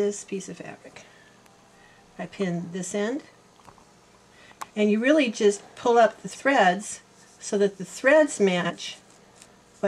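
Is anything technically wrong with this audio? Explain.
Yes, there are four spots where frames come out of order: at 1.45 to 1.64 s, 4.52 to 4.71 s, 6.30 to 6.41 s and 8.60 to 8.71 s. In each, two adjacent blocks got swapped before decoding, so a short stretch plays back-half first. You hear a brief garbled flutter. The first two swap blocks of about 93 ms, which points to four-frame runs. The last two swap about 46 ms blocks. No time goes missing.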